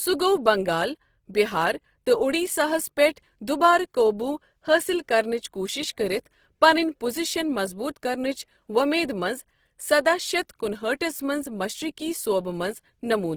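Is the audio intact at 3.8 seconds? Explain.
No. At 3.8 s, as across the whole clip, the speech sounds rough and grainy, likely from Opus compression: its music mode fills starved bands with folded or noise content, consistent with about 16 kbps.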